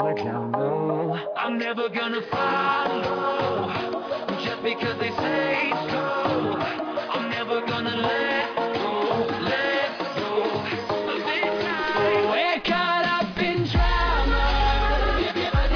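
No technical faults can be heard anywhere in this recording.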